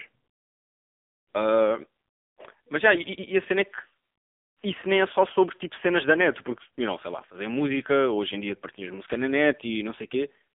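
AMR narrowband mobile codec damage runs through the whole speech clip. The codec rebuilds the voice from a vocal-tract model and a few pulses, so it sounds buzzy and synthetic, which fits a low mode near 6.7 kbps. The telephone band runs from 150 Hz to 3.6 kHz, with nothing above 3.7 kHz.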